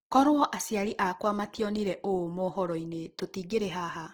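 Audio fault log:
Throughout: Opus compression. The speech has a grainy, rough, noisy texture across the whole clip, with harmonics turned hissy instead of clean, and the damage is plainly audible. The likely cause is Opus in its CELT music mode running short of bits, which fits a rate near 16 kbps. It keeps each band's energy and fills the shortfall with folded or noise content, so there are fewer MP3-style swirling holes. There is no muffled, hoarse speech-mode sound either, since content still reaches about 20.4 kHz.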